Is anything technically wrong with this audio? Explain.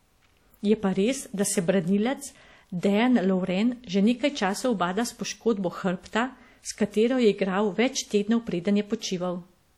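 Yes. Across the whole speech clip the sound is ringing and washy, with a plainly audible hiss that breathes up and down with the speech. This is likely WMA compression, at a depth of damage that fits a bitrate around 48 kbps. Long transform blocks spread quantisation noise over tens of milliseconds around each sound, and quiet spectral lines are zeroed. A spectrogram shows smearing ahead of onsets and patchy gaps in the upper bands. The waveform's noise floor rises and falls with level.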